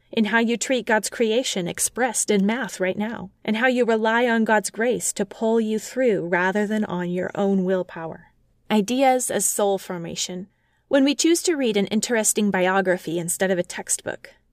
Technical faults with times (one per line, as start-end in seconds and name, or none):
none